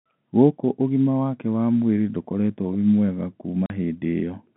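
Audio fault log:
3.66 to 3.70 s, packet loss filled with silence: the speech drops out abruptly for 40 ms, a hard-edged hole. Packets never reached the receiver, which played silence instead of concealing the gap, and the gap's length fits two consecutive 20 ms packets. The narrow telephone band of the G.711 line, roughly 150 Hz to 3.4 kHz, carries on unchanged on either side of the hole.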